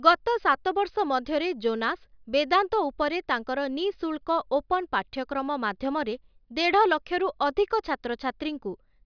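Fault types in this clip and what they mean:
No technical faults found in this speech recording; nothing to log.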